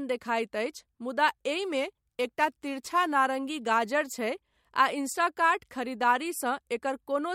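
From 1.63 to 3.13 s, a crude rate conversion shows up: samples appear to have been picked or repeated nearest-neighbour style with no filtering, which fits a 48 kHz to 44.1 kHz change. The resulting error, roughly 25 dB below the speech, adds a gritty, inharmonic fizz that tracks louder, brighter syllables.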